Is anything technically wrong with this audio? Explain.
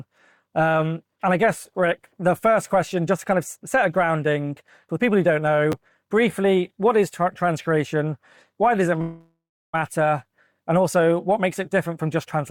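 Yes, there are two faults.

At 5.72 s there is a repeated buffer: fresh audio missed its deadline, so the device played the last block one extra time. The repeat is so short, consistent with a buffer of about 10 ms, that it comes across as a single click or tiny buzz rather than an audible stutter. Unlike a freeze, nothing fades and no gap opens; it is one hard-joined instant.

From 9.01 to 9.75 s there is a call audio freeze. The last sound is stretched into a buzzy tail that fades, with roughly 300 ms of silence, and then the audio resumes exactly where it left off. Nothing is skipped, but everything afterwards arrives about 720 ms late. This is likely packets held up in transit and an emptied jitter buffer. The long, decaying fill and the added delay separate it from the instantaneous repeat at 5.72 s.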